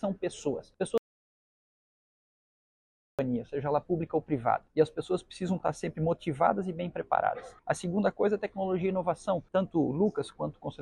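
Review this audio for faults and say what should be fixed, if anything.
Audio dropout to silence from 0.98 to 3.19 s: about 2.2 s of silence, with no room tone, unlike a pause, likely from a lost input. Monitor input levels during recording and secure cables and links.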